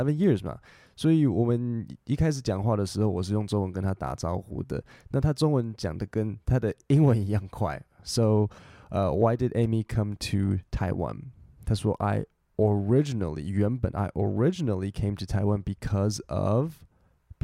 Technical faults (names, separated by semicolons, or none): none